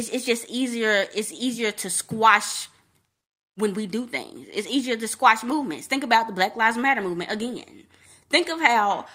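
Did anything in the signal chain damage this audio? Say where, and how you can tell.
No, the signal reaches the listener intact, with nothing introduced anywhere along the chain from capture to playback.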